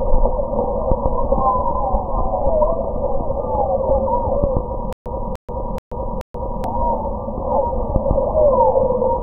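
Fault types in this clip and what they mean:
stutter with silent gaps: From 4.93 to 6.64 s, one 297 ms fragment repeats four times. Dead silence of 132 ms follows each, giving a steady 429 ms cycle. The stream likely stalled and replayed its last fragment on each retry. The intended sound there is lost.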